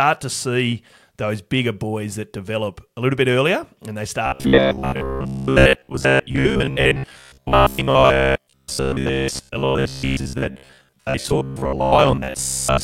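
Robotic sound from repeated short buffers runs from 4.26 s to the end of this speech clip, a rigid metallic buzz at 66.7 Hz. It is likely caused by audio arriving too seldom, with roughly 15 ms fragments looped for most of that stretch while new audio is skipped.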